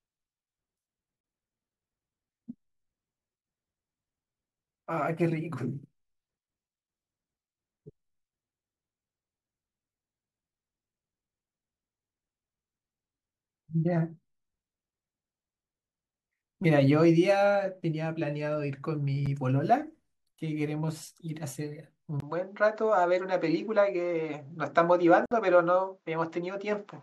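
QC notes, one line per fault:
1.21–1.24 s, 19.26 s, 25.26–25.32 s: gap between stream segments. Hard-edged silences of 30, 8 and 56 ms appear where segment timestamps fail to meet, and the boundaries fit a 6 s segment length. Each shows as a flat silent notch in the waveform and a clean vertical blank stripe on the spectrogram.
22.20 s to end: input switched to a poorer device, likely. After a 20 ms silence the speech turns duller and boxier, with nothing above 7.6 kHz. Loudness barely changes and the new background noise stays low. The spectrogram shows an abrupt horizontal ceiling at 7.6 kHz.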